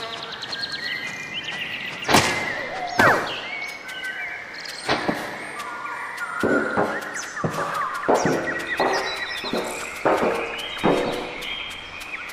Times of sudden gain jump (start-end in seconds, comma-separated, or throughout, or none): none